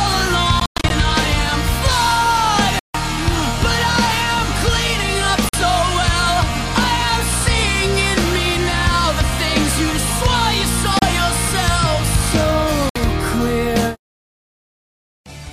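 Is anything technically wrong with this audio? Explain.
Yes. There are abrupt silent gaps at 0.60–0.91 s (several short holes totalling about 0.18 s, the longest 0.11 s), 2.79–2.95 s, 5.49–5.54 s, 10.99–11.05 s and 12.89–12.97 s. The pattern is likely a Bluetooth dropout. Packets arrived too late and were discarded, and playback resumed further along as though it had kept running. On a waveform these appear as flat, sharp-edged stretches, and on a spectrogram as blank vertical columns.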